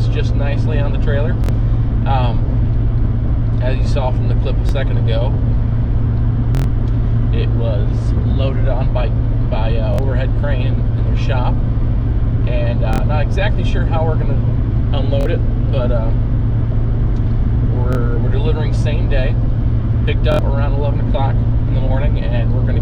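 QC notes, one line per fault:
1.44–20.39 s, repeated buffer: eight stutters at 1.44, 4.69, 6.55, 9.94, 12.93, 15.21, 17.93 and 20.32 s. Each time, late audio made the device replay one short block one to four times. The block length fits a 1024-sample buffer of about 23 ms. On the waveform these show as identical back-to-back segments, and on the spectrogram as vertical click lines at each hard join. The longest, at 6.55–6.64 s, has four repeats.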